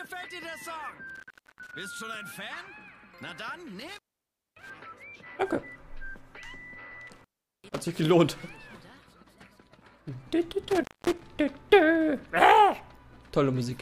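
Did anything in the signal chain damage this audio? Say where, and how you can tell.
Yes. The sound drops out four times, at 1.10 to 1.73 s, 3.80 to 4.70 s, 7.07 to 7.81 s and 10.70 to 11.20 s, each gap framed by crackle, with the line open for roughly 0.37, 0.58, 0.40 and 0.24 s. That points to intermittent contact in the analogue wiring. A loose plug or cable briefly breaks the connection, the scraping contacts crackle as it opens and closes, and only faint hiss remains while it is open.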